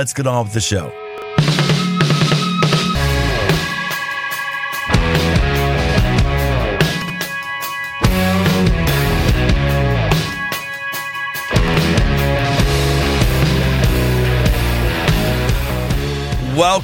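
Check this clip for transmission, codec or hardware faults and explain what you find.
Two kinds of fault turn up: chunks out of order three times, and damaged data in a compressed stream once.

Chunks out of order, at 1.18 to 1.22 s, 7.02 to 7.1 s and 11.68 to 11.76 s: a 20 ms block plays one chunk late at the first point and three chunks late at the other two. Nothing goes missing, so unlike a dropout there's no gap, just a brief jumbled stutter.

Damaged data in a compressed stream, at 2.95 s: corrupted frames make the decoder lose sync and hunt for the next frame header. That produces a short chirp or blip, rather than the reshuffled but complete sound of a misordered chunk.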